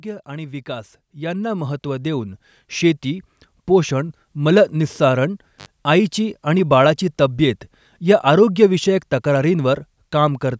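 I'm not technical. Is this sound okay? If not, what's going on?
No. For the first four seconds or so, from 0.05 to 4.23 s, the speech and the background swell up together, ending up clearly louder than where they started. That is automatic gain rising. The recording device judged the incoming sound too quiet and turned its own volume up step by step, rather than all at once. Because it raises everything it hears, the background noise grows right along with the voice.

The second problem comes at 5.58 to 5.66 s, where the speech drops out for about 60 milliseconds. There's a crackle as it cuts out and again as it comes back, with only faint hiss in between. That is an intermittent contact, a loose cable or plug briefly losing its connection, so for that instant almost nothing from the microphone gets through.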